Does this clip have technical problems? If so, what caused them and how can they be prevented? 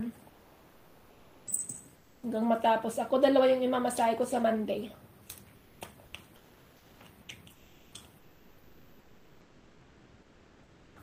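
Yes. Comfort noise replaces the background six times: 0.29–1.47 s, 1.95–2.23 s, 5.56–5.81 s, 6.36–7.00 s, 7.52–7.94 s and 8.18–10.96 s. In each gap the quiet background, about 32 to 34 dB below the loudest passages, becomes a flat, textureless hiss, about 4 to 5 dB quieter (about 8 dB at 1.95 s). The likely cause is discontinuous transmission, as in Opus DTX: the sender stops transmitting between active passages and the receiver synthesises noise. Disabling DTX on the sending encoder prevents this.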